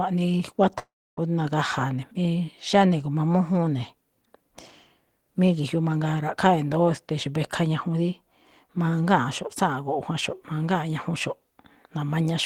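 Speech, where from 0.79 to 1.19 s the sound smears into a fading buzz, then silence, returning with 0.38 s missing, likely a long network dropout.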